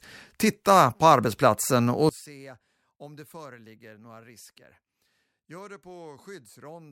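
One channel inverted, from 2.09 s to the end: the voice suddenly drops by about 25 dB. The likely cause is one stereo channel carrying reversed polarity, so when the two sides are combined the centred speech, present almost identically in both, largely cancels itself. What survives is only the small difference between channels, a faint residue of the voice.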